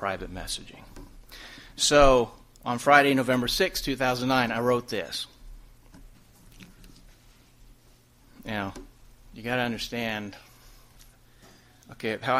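No technical fault can be heard anywhere in this audio. Nothing in it calls for a repair.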